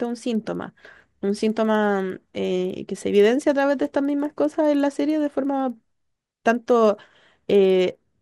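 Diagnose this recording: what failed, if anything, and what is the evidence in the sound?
The sample-rate conversion stage failed: a resampler restarted on every block. Throughout the speech, a buzz at 20 Hz rides under the signal and only appears with it. It fits 50 ms blocks converted from 24 kHz to 48 kHz independently, each edge filtered without its neighbouring samples.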